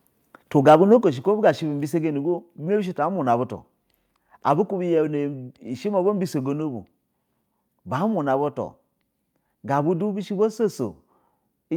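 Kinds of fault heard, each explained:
Microphone overload: From 0.68 to 0.95 s the loudest speech peaks turn harsh and crackly. Around one percent of samples are flattened at the converter's limit, pushing about 2 dB past the limit, likely because input volume was set too high. The waveform shows squared-off tops, and the spectrogram shows broadband smearing above the harmonics.
Microphone volume stepped down: At 1.02 s, just after the distorted burst, speech and background drop together by about 6 dB in a single step, likely the call software cutting the input volume. The waveform envelope shrinks abruptly, and the spectrogram dims evenly across all frequencies.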